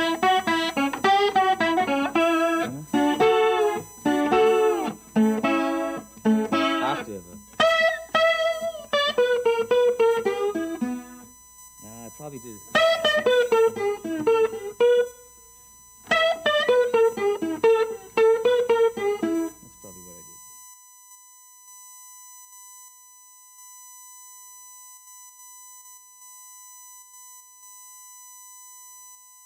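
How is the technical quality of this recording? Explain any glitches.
The recording carries one continuous fault. USB whine is present throughout: a fixed 1 kHz tone and its harmonics, strongest at 6 kHz, around 25 dB below the sound. The 1 kHz spacing fits current drawn in 1 ms USB frames leaking in through power or ground.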